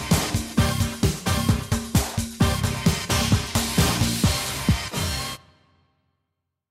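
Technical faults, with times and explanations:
No technical faults are present.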